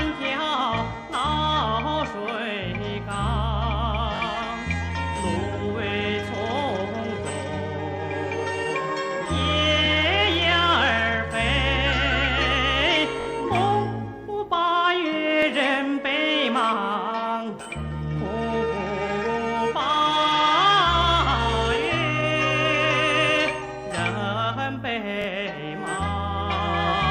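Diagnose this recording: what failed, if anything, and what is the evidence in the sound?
Repeated buffer at 4.16, 9.86, 13.21, 15.42, 17.64 and 25.22 s, a driver or buffer-stage underrun. Each time a 21.33 ms slice replays one to three extra times with hard joins, heard as a short stutter. The slice length fits a 1024-sample buffer, and no audio is skipped.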